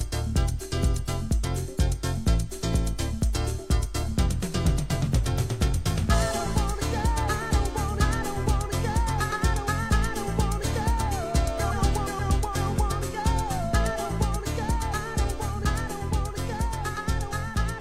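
Nothing stood out as a technical problem on listening to this audio.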